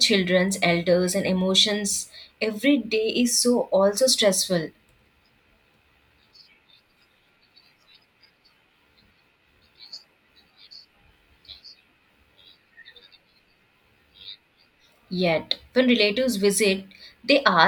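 No technical faults are audible.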